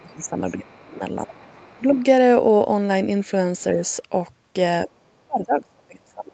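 The talker's speech dips by roughly 15 to 30 dB at 0.0–0.34, 0.53–1.03, 1.25–1.99, 4.86–4.93 and 5.27–6.33 s, likely speech suppressed in double talk, where the echo canceller turns down both voices at once. A faint second voice, around 30 dB below the talker, appears at 0.69–0.95 and 1.28–2.04 s, likely the other side's voice leaking through as residual loudspeaker echo.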